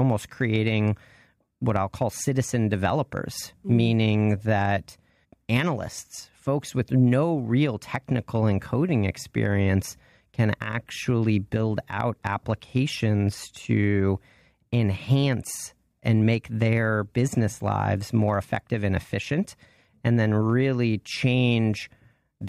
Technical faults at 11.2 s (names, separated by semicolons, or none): none